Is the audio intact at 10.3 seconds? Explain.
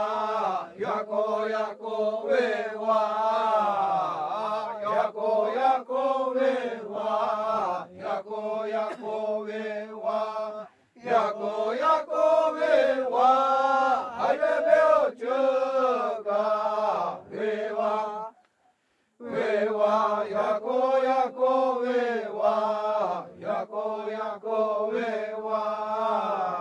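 Yes, the audio is intact at 10.3 seconds, with no dropout, click, distortion or other fault in the sound at that moment.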